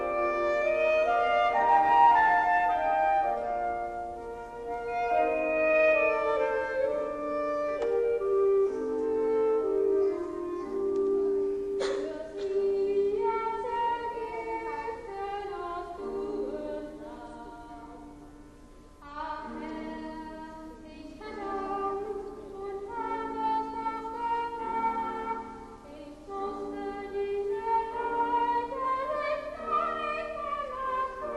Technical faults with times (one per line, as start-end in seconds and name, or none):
4.88-6.20 loudspeaker feedback squeal